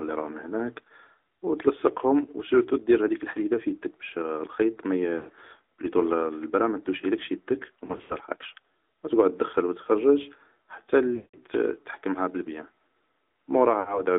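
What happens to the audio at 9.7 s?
At 9.7 s the speech sounds thin, buzzy and synthetic, with nothing above about 3.6 kHz, from the AMR narrowband mobile codec that runs throughout, its damage consistent with a mid-range rate near 10.2 kbps.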